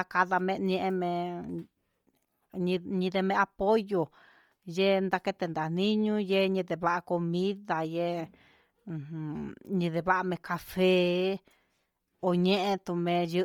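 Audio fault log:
throughout: Bluetooth LC3 compression, likely the cause of the heavy breathy, grainy edge on the speech, where upper-spectrum detail is zeroed and refilled with noise. The damage fits a 32 kbps LC3 stream with 10 ms frames. Content still reaches about 20.2 kHz.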